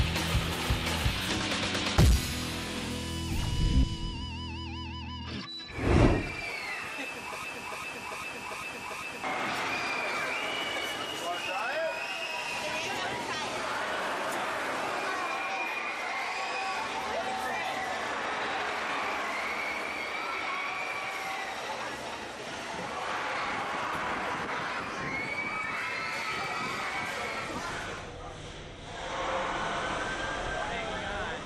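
Broken-record loop, 7.44 to 9.24 s: a 396 ms fragment of audio repeats five times, likely from a stalled player, encoder or stream, losing the sound due there.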